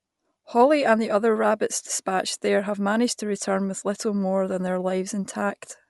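Bluetooth LC3 compression is the likely cause of damage heard throughout the speech. Nothing remains above 11.5 kHz, and the upper band has a plainly audible breathy, grainy edge where spectral detail was dropped and replaced with noise. This fits 10 ms frames at roughly 48 kbps.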